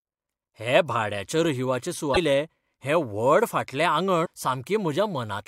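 At 2.13 s, right after "हे भाड्याच्या रहिवाचे", the speech breaks into a short glitch of about 40 ms, and at 4.22 s there's a second, similar blip lasting about 45 ms. Both point to damaged data in the compressed stream. A stretch of the encoded bytes got corrupted, so the decoder misread those frames, lost sync and had to hunt for the next valid frame header. That's where the brief glitches come from.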